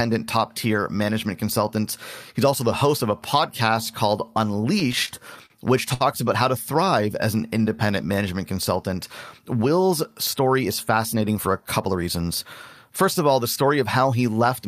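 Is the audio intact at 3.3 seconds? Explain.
Yes, the speech at 3.3 seconds plays through intact, with no dropout, click, distortion or other fault at that point.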